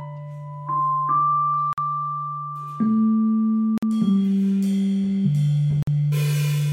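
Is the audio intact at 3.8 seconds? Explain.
No, the music drops out in a hard-edged hole from 3.78 to 3.83 s, about 48 ms: a gap between chunks, where silence was inserted at a join between 2-second chunks.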